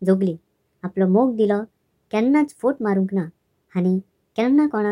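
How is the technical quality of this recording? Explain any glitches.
The speech plays throughout about 1.38 times too fast and roughly five and a half semitones high. That is a wrong sample rate fault: playback runs faster than recording with no conversion, which fits 32 kHz audio played at 44.1 kHz.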